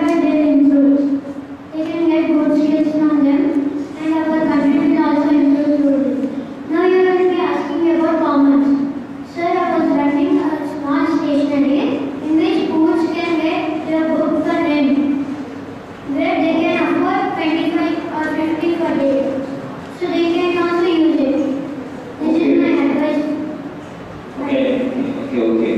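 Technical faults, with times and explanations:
No technical faults can be heard.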